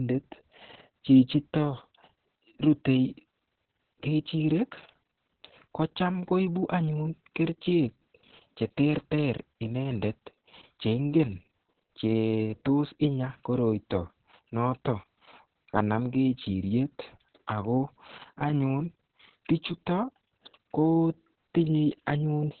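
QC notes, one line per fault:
Throughout: Opus voice compression. The speech is confined to a narrow band with nothing above 4.5 kHz, so it sounds muffled and telephone-like. Heavy codec damage leaves a hoarse, slightly robotic texture, because the linear-prediction coder describes the vocal excitation only coarsely. Both the narrowband limit and the amount of damage point to the speech-oriented SILK mode running at a very low bitrate, around 6 kbps.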